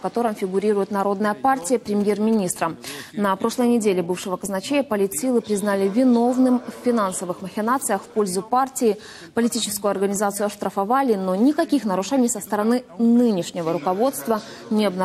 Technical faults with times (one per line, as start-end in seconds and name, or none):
1.62-2.58 GSM signalling bursts